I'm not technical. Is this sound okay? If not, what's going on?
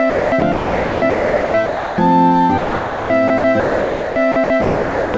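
No. The likely cause is the sender's voice detector repeatedly deciding the sound had stopped and pausing transmission, so stretches were filled with artificial comfort noise. This is sound chopped by the voice detector, from 0.10 to 1.98 s and again from 2.58 to 5.14 s, with about 1.5 s and 1.8 s replaced. The sound cuts in and out. Nothing above 8 kHz comes through the call link.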